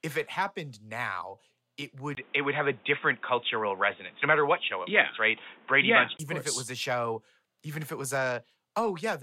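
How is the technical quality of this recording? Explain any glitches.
There's one real glitch. From 2.15 to 6.19 s the speech turns dull and boxy, with nothing above 3.8 kHz, a short 20 ms dropout at the switch, a level shift of about 5 dB and new background noise about 30 dB down. That's likely the input switched to a poorer device before switching back.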